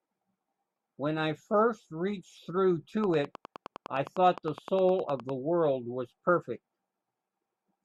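A speech recording carries a train of clicks from 3.04 s to 5.30 s: about twenty near-identical ticks at a steady 9.8 per second, peaking at about 5 dB above the speech and continuing through the pauses. The cause is likely electrical interference from nearby equipment or a faulty connection or power supply. Their even spacing and matching shape set them apart from crackle, which is irregular and varied, and from an isolated pop, which occurs once.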